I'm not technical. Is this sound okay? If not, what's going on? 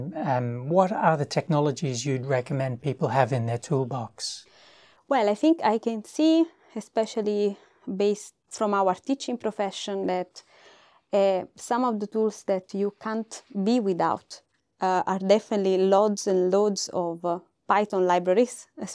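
Yes, this recording sounds fine, with no technical problems to be heard. There's nothing in it that needs fixing.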